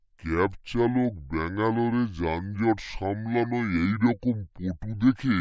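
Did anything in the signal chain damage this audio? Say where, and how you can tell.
Yes: a wrong sample rate at the playback stage affects the whole clip. The speech runs at two-thirds speed and sounds about 7 semitones low, with pitch and tempo dropping together, which fits 24 kHz samples being played at 16 kHz without conversion.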